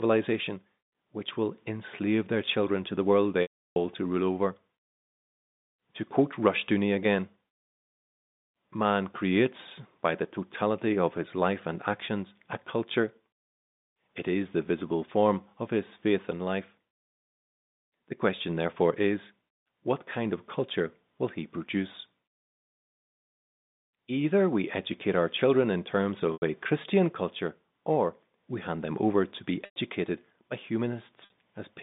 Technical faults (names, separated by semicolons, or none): packet loss with pitch repetition